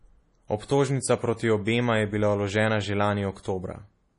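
From the start, the speech sounds watery and swirly, most likely from heavy MP3 compression. Nothing is heard above 10.6 kHz. The encoder cut the treble and kept dropping weak detail between frames. That fits a low bitrate, around 32 kbps.

From 3.43 to 3.45 s, a pre-echo puts a short hiss of about 24 ms just before a sharp attack. The codec spread its noise across the whole block. The quiet moment before the attack filled with it, and the attack sounds smeared.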